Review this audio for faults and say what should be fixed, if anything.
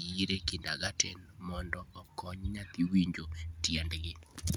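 No faults found in the speech recording, so nothing needs fixing.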